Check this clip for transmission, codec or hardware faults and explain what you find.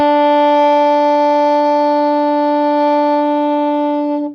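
Nothing in the music points to any transmission, codec or hardware problem; the signal stays continuous and stable throughout.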